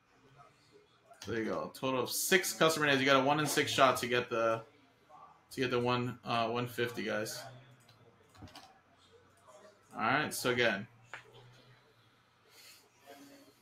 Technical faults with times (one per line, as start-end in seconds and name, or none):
0.00-13.61 noise suppressor applied to music or sounds
0.01-1.10 sound cut by the noise suppressor
4.66-5.51 sound cut by the noise suppressor
7.63-8.40 sound cut by the noise suppressor
8.68-9.92 sound cut by the noise suppressor
10.88-11.10 sound cut by the noise suppressor
11.52-13.07 sound cut by the noise suppressor